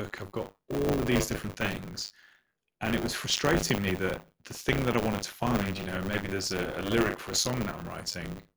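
This is a speech clip with buffer tearing running the whole way through: a steady robotic rattle at 100 Hz that rides on the voice and drops out in the pauses. The writer and the hardware reader have drifted so they cross inside every 10 ms period, leaving a small slice of each period, something like a sixth, filled with stale audio from around 40 ms earlier, with hard joins on either side.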